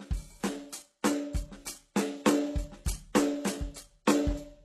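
Throughout the music, the signal was likely put through transcoding between lossy codecs, an MP3 stage and then a very low-rate HE-AAC stage. Nothing remains above 12.3 kHz, and the MP3 smearing and warble sit alongside HE-AAC's hissy, synthetic-sounding treble.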